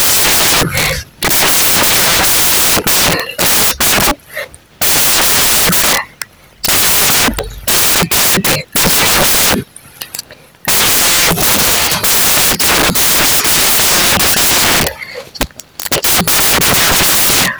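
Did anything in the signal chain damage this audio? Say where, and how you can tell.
Yes: sample-format conversion built samples from the wrong bytes, so fast-changing low bits dominate and the whole speech clip becomes loud, harsh broadband noise.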